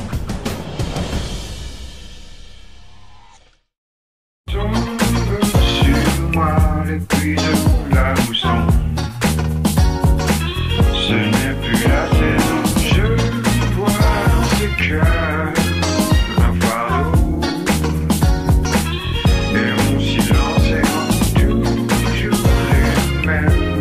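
Nothing technically wrong turns up anywhere in this audio, so there are no problems, times or causes to point to.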